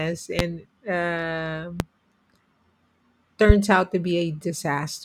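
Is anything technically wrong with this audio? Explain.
Yes, the speech has three loud pops, at 0.39–0.43 s, 1.80–1.83 s and 3.50–3.53 s. These are single sharp transients, about 20 dB above the signal (the last nearer 25 dB), likely from a voltage pulse such as a switch or driver glitch, while speech continues underneath.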